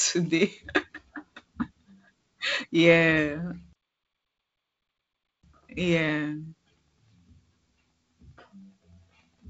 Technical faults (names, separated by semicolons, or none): playback stall